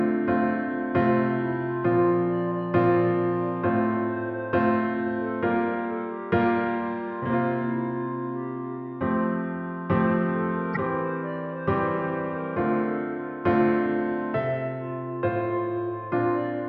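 At 10.74 to 10.77 s there is a brief burst of damaged data in a compressed stream, about 26 ms long. Bytes in the compressed data were corrupted, so the decoder misread them and had to hunt for the next valid frame header before resuming. It comes through as a short chirp, squawk, click or hole.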